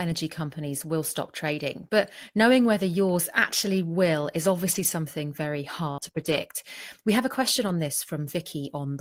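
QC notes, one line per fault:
4.71 to 6.38 s, scattered short gaps: just after "yours actually will is", about three small holes open up across this stretch, the longest around 70 ms. They come across as brief ticks and smears in otherwise clear speech. Lost or late packets, roughly 100 ms in total, were patched by continuing the preceding sound.
7.68 s, lost packet rebuilt from error correction: right after "have a question", a 20 ms moment sounds rougher and noisier, with no gap. One packet was lost, and the decoder played a low-bitrate copy carried in the following packet in its place.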